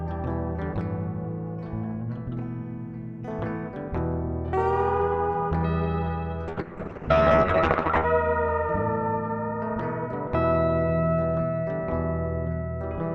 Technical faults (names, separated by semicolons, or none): call bitrate drop